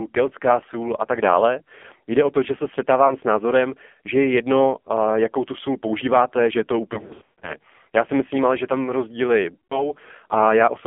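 Throughout, the speech passes through an AMR narrowband mobile codec. Nothing below about 200 Hz or above 3.4 kHz survives, and the heavy, buzzy, synthetic texture fits a low rate near 6 kbps. Plain band-limiting would narrow the sound but leave it natural.

Lost AMR speech frames follow. At 3.08 s, a brief dip fits one missing 20 ms frame. From 6.94 to 7.55 s, scattered gaps repeat the last pitch and fade, with the longest stretch about 140 ms. From 9.54 to 9.91 s, the sound drags, dies out, then returns rough. Each is a smeared fade rather than a hard dropout.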